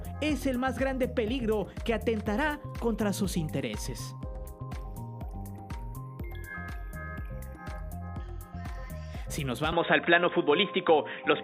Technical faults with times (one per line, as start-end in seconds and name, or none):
9.72-11.43 input switched to a poorer device